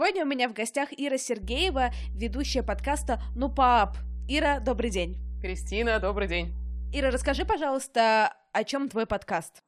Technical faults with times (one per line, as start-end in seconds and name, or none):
1.43-7.52 mains hum